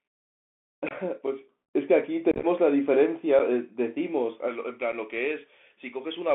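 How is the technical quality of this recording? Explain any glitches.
Technical quality is poor: the speech runs through a narrowband headset link from start to finish, with several dropouts and an unbalanced treble lift in the last stretch.

Bluetooth CVSD headset codec (throughout): the audio is squeezed into roughly 200 Hz to 3.4 kHz, as on a 64 kbps CVSD link. Its one-bit delta coding leaves a grainy hiss and scratchy s sounds. Unlike low-bitrate transform codecs, there is no swirly or watery smearing, just coarse grit.

Unconcealed Bluetooth headset packet loss (0.89 to 0.93 s, 2.31 to 2.45 s, 3.39 s, 4.92 s): lost voice packets were replaced by silence or an idle pattern rather than patched. At 0.89 s a few packets drop out over about 22 ms. Around 2.31 s roughly ten go missing, scattered across 120 ms, which produces a chopped, crackly stretch. The single-packet losses at 3.39 and 4.92 s are 7.5 ms holes. 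These hard-edged holes are what distinguishes them from smoothed concealment.

Pre-emphasis left on (4.48 s to the end): a J.17 treble boost, about 11 dB at 10 kHz relative to 1 kHz, was applied without the matching cut. The sound turns suddenly thin and hissy-bright. Because it starts partway through the clip, it is an emphasis mismatch rather than the codec's constant narrowband tone.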